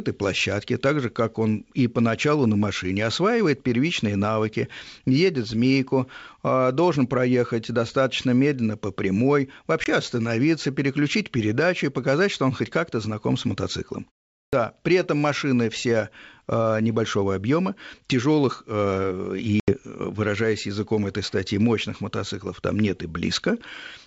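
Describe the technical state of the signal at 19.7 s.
Packet loss on the ADPCM call spans 19.60 to 19.74 s: about 80 ms of audio, a handful of packets, went missing and was filled with silence, leaving the decoder's predictor and step size out of step with the sender's. The sound drops into a hard-edged hole, then returns with brief, slight distortion before settling.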